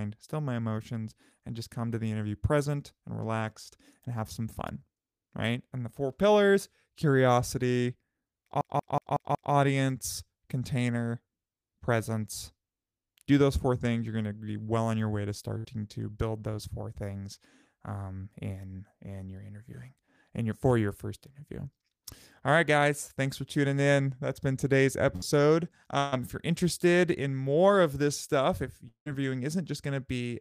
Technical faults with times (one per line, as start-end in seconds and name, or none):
8.61-9.53 CD stuck on one turn
15.58-15.66 burst of packet loss
25.16-25.24 burst of packet loss
25.98-26.14 burst of packet loss
28.88-29.08 long network dropout